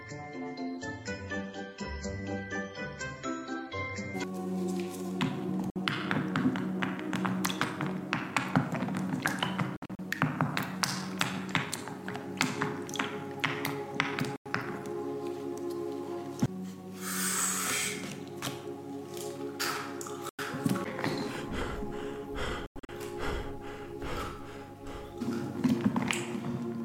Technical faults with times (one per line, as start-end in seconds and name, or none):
5.70-5.76 Bluetooth dropout
9.76-9.99 Bluetooth dropout
14.36-14.46 Bluetooth dropout
20.29-20.39 Bluetooth dropout
22.66-22.89 Bluetooth dropout